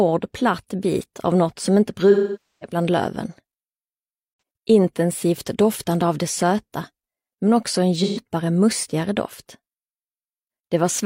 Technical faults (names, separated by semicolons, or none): AAC frame loss with concealment